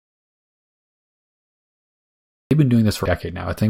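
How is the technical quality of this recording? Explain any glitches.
The recording has two clear technical faults: a long stretch of dead silence at the start and a brief decoding glitch near the end.

From the very beginning until about 2.51 s, the audio is an audio dropout to silence. The signal is already missing when the clip opens, and the gap is silent with no room tone at all. That points to the input feed being lost, likely through a disconnected device or an unintended mute, while the recorder kept writing empty samples. Whatever speech occurred then is unrecoverable.

At about 3.04 s there is a short glitch, the signature of damaged data in a compressed stream. Data in the encoded file was corrupted, so the decoder could not parse the frame at that point, lost its place, and had to resynchronise on the next valid frame header. The result is a brief disturbance lasting only about 14 milliseconds.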